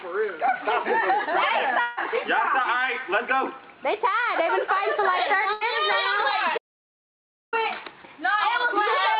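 From 1.81 to 1.99 s, the sound is held over as a fading buzz or hiss, with no silence left at the end. About 160 ms of audio is gone. This points to a long network dropout, likely. The receiver covered the gap by extending the last sound. When playback resumes, the missing stretch is simply skipped.

At 5.53 s comes a burst of packet loss lasting until 5.63 s. About 80 ms never arrived in time. The receiver filled it by repeating the last sound and turning it down, so it fades briefly. Then the audio jumps ahead, with that part missing.

From 6.58 to 7.53 s, the audio cuts out to complete silence for about 0.95 s. No room tone remains in the gap. The sound stops and restarts mid-flow. This is an audio dropout to silence. The likely cause is that the input was lost while the recorder kept writing silence.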